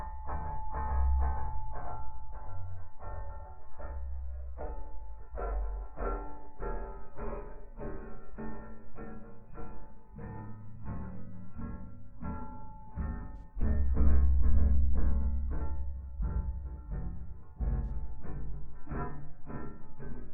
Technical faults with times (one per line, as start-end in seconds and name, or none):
13.37-13.43 AAC frame loss with concealment
17.85-17.91 AAC frame loss with concealment